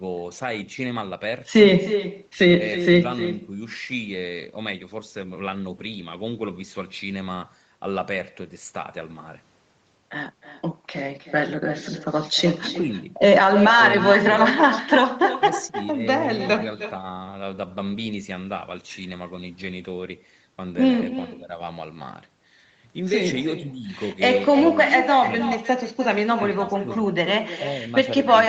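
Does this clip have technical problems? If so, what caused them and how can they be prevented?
Yes. Throughout the clip the far end has an echo with no canceller: a loudspeaker there replays the call, its microphone captures that playback, and nothing strips it out before it travels back. The result is that every phrase is trailed, roughly a third of a second later, by a copy about 11 dB quieter and thin, sitting inside a band that stops at 8 kHz. Enabling acoustic echo cancellation on the far-end device, or having that side use a headset, prevents it.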